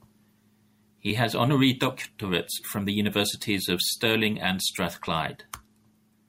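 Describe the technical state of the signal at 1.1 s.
At 1.10 to 1.13 s the speech has an overlap between stream segments. Two segments, each about 1 s long, carry overlapping time stamps, and the player trims roughly 25 ms of audio that was never duplicated. The waveform jumps across the gap, producing a brief click or skip.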